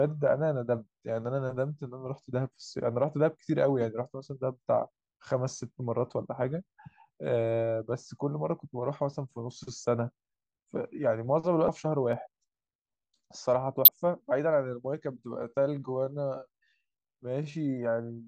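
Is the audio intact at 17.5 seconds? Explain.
No. A time-stretched section runs from 15.29 s to the end of the clip. The speech is slowed to about 0.68 times its pace while the pitch stays the same. Software likely repeated short pieces to lengthen it. This makes the speech drag.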